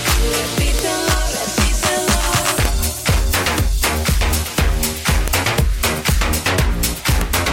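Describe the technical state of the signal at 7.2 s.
At 7.21 s there is a file header played as audio: a single sharp, loud click lasting about a millisecond. A new WAV piece begins here with its header still attached, so those few dozen bytes of file information are read as sample values and come out as a snap. Unlike an ordinary splice discontinuity, whose click depends on the waveform mismatch at the join, this snap is loud and abrupt regardless of what the surrounding sound is doing.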